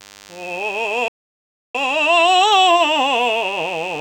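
A thin, steady buzz at 100 Hz, rich in harmonics, sits under the music from start to finish, well below it in level. This is DECT cordless phone buzz: a nearby handset or base station radiates a burst every 10 ms, and the audio circuitry rectifies each one into audible sound.

At 1.08 s the music cuts out completely and stays silent for about 0.66 s, picking up again at 1.75 s. This playback stall was likely caused by the player's data running dry or its thread being blocked, leaving the output with nothing to send until it caught up.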